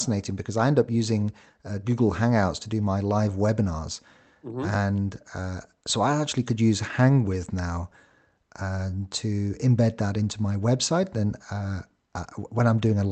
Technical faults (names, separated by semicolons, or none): none